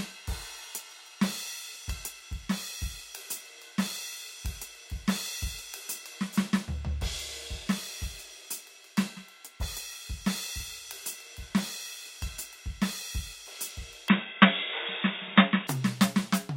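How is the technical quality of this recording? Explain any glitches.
One glitch, near the end of the music. From 14.09 to 15.67 s the sound turns dull and boxy, with nothing above 3.8 kHz, a level shift of about 5 dB and faint new hiss, likely an input switched to a poorer device.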